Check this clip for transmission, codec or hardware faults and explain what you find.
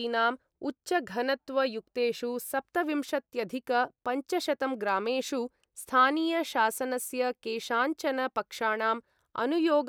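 No faults can be heard anywhere in the recording.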